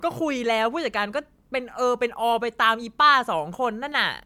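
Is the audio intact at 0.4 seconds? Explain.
No, generation loss runs through the whole clip, including 0.4 s: the speech was likely re-encoded as MP3 about three times, compounding quantisation noise into a swirly, hollow smear with blurred attacks.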